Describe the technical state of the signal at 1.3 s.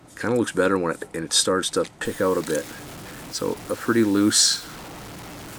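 At 1.3 s the signal is intact, with no audible fault at that moment.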